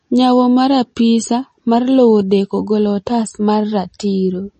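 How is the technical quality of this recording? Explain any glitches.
The technical quality is poor. The speech carries plainly audible MP3 compression from start to finish. Nothing is heard above 8.4 kHz. The treble stops at that fixed edge, so the speech sounds dull and boxed in. Short on bits, the encoder drops weak frequency detail. That detail flickers in and out between frames. The result is a watery, swirling texture, with metallic chirps on s sounds. Attacks smear. The damage points to a low bitrate, likely around 32 kbps.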